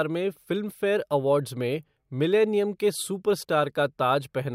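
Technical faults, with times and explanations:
No technical faults are audible anywhere in the speech.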